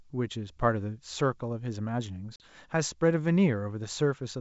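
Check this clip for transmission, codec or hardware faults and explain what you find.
One transmission fault: packet loss on an ADPCM call at 2.36–2.44 s. A handful of packets dropped, leaving a hard-edged 40 ms gap. The decoder's predictor then mistracked briefly, so the speech resumes with a short distortion over the light G.722 upper-band hiss.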